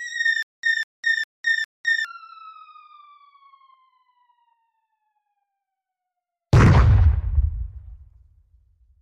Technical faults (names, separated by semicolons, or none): stutter with silent gaps